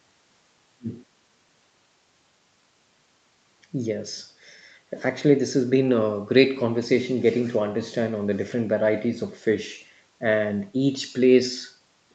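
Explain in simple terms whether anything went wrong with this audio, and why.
Nothing went wrong here: the speech has passed through an ordinary call connection, whose microphone processing and call codec keep the sound below about 8 kHz, which is the normal character of a call rather than a problem.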